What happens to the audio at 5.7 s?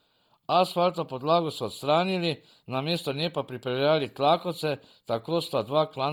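At 5.7 s the speech carries a breathy, grainy edge from Bluetooth LC3 compression, which is likely present throughout. The upper spectrum has been thinned and refilled with noise rather than simply cut, since content still reaches about 20.2 kHz. That noisy fill sets it apart from a plain low-pass. The heavy damage points to a low bitrate near 32 kbps in 10 ms frames.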